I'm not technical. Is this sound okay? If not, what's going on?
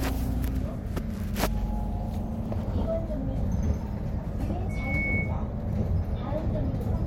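No. From 4.69 to 5.38 s a single high whistle near 2.2 kHz swells up within about a third of a second and rings over everything. That's loudspeaker feedback squeal: a microphone heard its own loudspeaker, and that one pitch kept amplifying itself in a loop.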